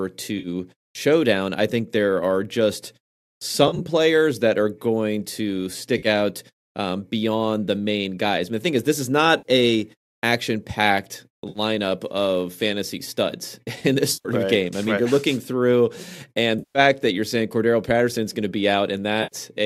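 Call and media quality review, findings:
AAC frame loss with concealment, eight dropouts: 0.39, 3.68, 5.98, 9.38, 11.49, 14.13, 16.59, 19.23 s. Smeared, phasey patches of 50 to 160 ms. At 5.98 s after "that are going to", 11.49 s after "a action packed", 14.13 s after "in this". At 3.68 s, 70 ms of loss scattered over 120 ms. Decoder rebuilding missing frames from the last good spectrum. Longest gaps at 14.13 and 16.59 s. Stream is likely low-delay AAC, roughly 10 ms frames.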